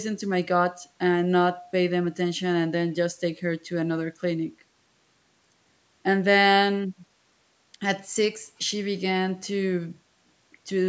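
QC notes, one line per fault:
No faults found; the speech shows normal call microphone processing, with the lowest bass rolled off.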